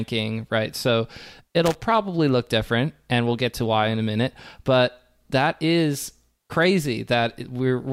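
From 1.66 to 1.75 s, just before "probably look different and", loose connector crackle chops the speech as a worn contact makes and breaks, giving an irregular scratchy burst. The waveform shows ragged dropouts and spikes; the spectrogram shows scattered broadband vertical streaks.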